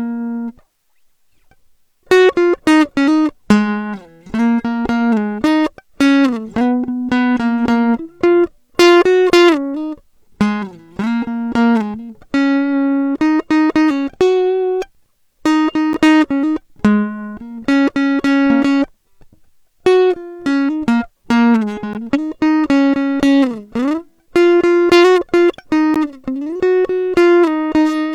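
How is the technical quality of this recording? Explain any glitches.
The music is interrupted by three brief dropouts at 15.93, 21.93 and 25.94 seconds. Each is a gap between stream segments. The audio arrives in 2-second segments, and at these boundaries the timestamps of consecutive segments leave a small hole that the player fills with silence, adding about 11, 15 and 15 ms. Each one sounds like a hard-edged cut where the music abruptly stops and resumes. No music is lost, but the timeline shifts slightly later at each gap.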